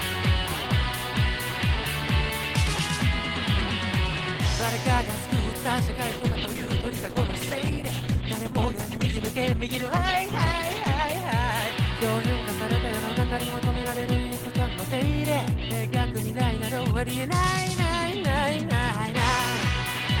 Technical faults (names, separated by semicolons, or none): call bitrate drop